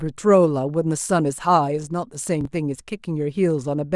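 At 2.41 to 2.45 s, chunks out of order: a roughly 11 ms block arrived late, apparently three blocks behind, so the speech jumbles briefly.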